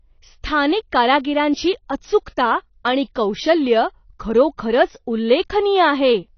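From start to finish the speech has no content above about 6.5 kHz, and the codec damage is plainly audible: sibilants sound smeared and fizzy rather than crisp, and sustained vowels carry a warbling texture. The likely cause is AAC compression at a low bitrate, which fits AAC-LC running near 24 kbps. At that rate the encoder lowers its cut-off and spends too few bits on the remaining bands, leaving the upper spectrum patchy and dull.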